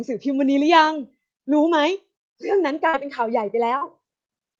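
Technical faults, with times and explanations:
2.89–2.95 s and 3.77–3.83 s, short concealed packet loss: about 40 ms of audio failed to reach the decoder each time, so the receiver extended the preceding sound from its pitch or as shaped noise and then crossfaded back into the real signal. The result is a brief smear or wobble rather than a hard gap of silence or a sharp click, which sets it apart from an unconcealed dropout.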